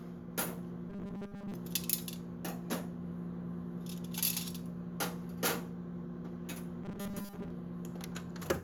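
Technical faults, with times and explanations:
0.90–1.54 s and 6.84–7.50 s: robotic sound from repeated short buffers. The sound collapses into a rigid metallic buzz fixed at 200 Hz, likely from one roughly 5 ms buffer being replayed in place of most of the real audio. Unlike a stutter or dropout, there are no gaps, only a steady imposed pitch.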